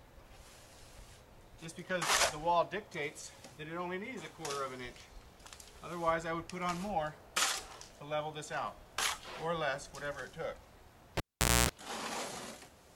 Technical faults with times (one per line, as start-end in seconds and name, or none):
11.17-11.69 cable pulled and plugged in